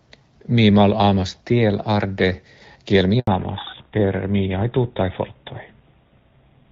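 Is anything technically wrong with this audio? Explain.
Yes, there are two problems, and they hit together right around the 3.2 s mark.

First, a handover gap from 3.19 to 3.27 s: the call jumps networks, no speech frames get through, and the voice cuts out for about 80 ms. Whatever was said in that window is simply gone.

Then a fallback to narrowband from 3.27 s to the end. Before that, the HD Voice wideband codec sounds clean. After it, nothing remains above 4 kHz, so the voice turns duller and grittier, which fits a drop to GSM full rate.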